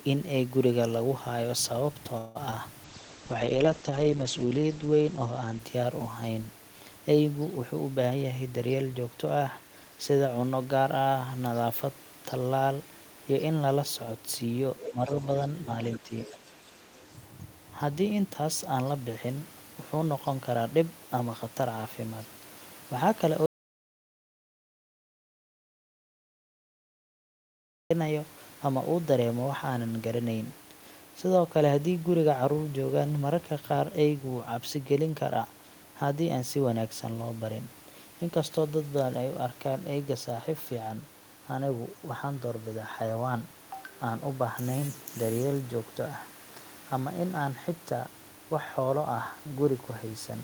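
At 2.17 to 2.37 s a call audio freeze stretches the last sound into a fading buzz for about 177 ms, likely from delayed packets emptying the jitter buffer. Nothing is lost, but a smeared band appears on the spectrogram. From 2.51 to 2.54 s a short concealed packet loss covers about 20 ms of missing audio with a brief smear, visible as a blurred sliver. A call bitrate drop from 2.85 to 6.67 s cuts the rate from 32 to 9 kbps for 1.5 s at its lowest, making the speech rough and muffled as the spectrogram's ceiling falls from 20 kHz to 8 kHz. Between 8.09 and 9.37 s a jitter buffer speed-up removes roughly 200 ms of pitch periods, so the speech runs at 114% speed without a pitch change, and the syllables look compressed on the waveform. The other side's voice leaking through appears at 14.78 to 15.26 s at about 10 dB below the speech, then at 15.83 to 15.98 s and 16.23 to 17.13 s at about 20 dB below, likely uncancelled loudspeaker echo. 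Speech suppressed in double talk dips the talker by about 10 dB at 14.89 to 15.10 s and 16.00 to 16.12 s, which shows as notches in the envelope. From 23.46 to 27.9 s an audio dropout to silence leaves a flat silent stretch for about 4.4 s, likely from lost input, with no room tone.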